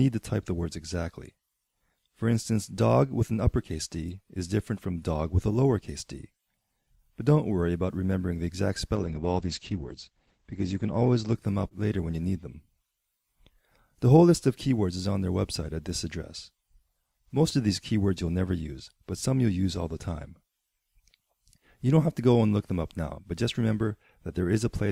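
From 8.96 to 13.17 s the audio turns rough and watery and loses everything above 8 kHz, at its worst for 1.64 s. This is a call bitrate drop: the bandwidth estimate fell and the encoder coded far more coarsely, which fits a fall from about 128 kbps to 11 kbps.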